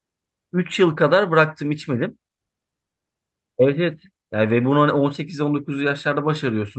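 Nothing stood out as a fault on listening to this speech clip, which comes through a WebRTC call path with Opus coding.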